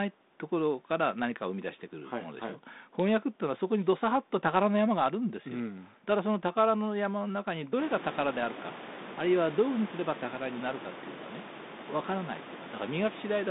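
No technical faults are present.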